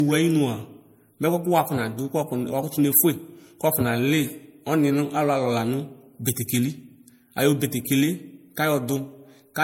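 Transcoding between lossy codecs runs throughout the speech. It was likely MP3 at 64 kbit/s, then Vorbis at 62 kbit/s, with stacked artefacts and nothing above 16.6 kHz.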